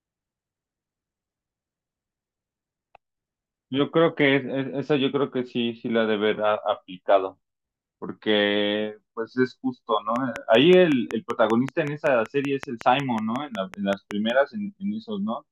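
Speech clip with a train of clicks from 10.16 to 14.31 s: about twenty near-identical pulses at a steady 5.3 per second, peaking roughly 10 dB above the speech and ticking through pauses too. Unlike random crackle, the even spacing and repeated shape point to likely periodic interference from nearby equipment.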